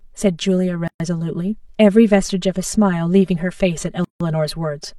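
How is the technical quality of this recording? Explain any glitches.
The technical quality is compromised by two separate problems: a constant hollow colouring and two brief dropouts.

Channel delay (comb filtering) runs throughout. The speech sounds hollow and phasey because one channel lags the other by about 5 ms, carving evenly spaced notches from around 100 Hz upward.

A gap at a join of encoded pieces occurs twice: a 124 ms gap from 0.88 to 1.00 s, and a 160 ms gap from 4.04 to 4.21 s. Each breaks off with smeared edges and resumes mid-flow, from encoder delay and padding left in where separately encoded pieces were joined.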